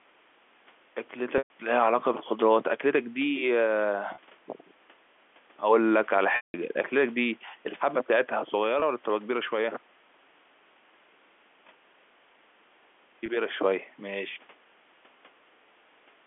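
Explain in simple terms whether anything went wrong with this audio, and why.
Five brief glitches: at 1.38, 4.14, 6.36, 8.8 and 13.26 s the speech sticks on a held, buzzy tone. The longer ones, around 120 ms at 1.38 s and 180 ms at 6.36 s, fade toward silence. This is packet loss with pitch repetition: pieces of the telephone stream went missing, and the receiver filled each gap by repeating the last bit of voice.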